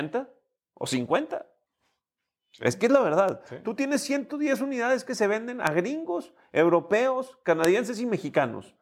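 A speech recording marked by three bit error spikes, sharp isolated ticks at 3.29 s, 5.67 s and 7.65 s, peaking at about -21, -9 and -3 dBFS respectively. Each lasts only three samples: a flipped bit throws the sample value by a power of two before it snaps back. On the waveform each appears as a lone needle standing clear of the surrounding signal; on a spectrogram, as a thin vertical line running across the full frequency range.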